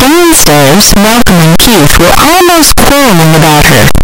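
From the very start to the end, the speech is buried in loud, harsh distortion. Quiet moments are as loud as the rest. Each zero crossing snaps across the full range. This points to a signed and unsigned mix-up, likely in reading the 8-bit samples.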